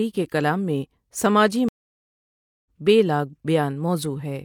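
At 1.69 s the speech drops to silence for 0.97 s. This is a stream reconnect: the connection broke and the player reconnected with a fresh decoder. When sound returns at 2.66 s, on "بے لاگ", it has skipped ahead about a second.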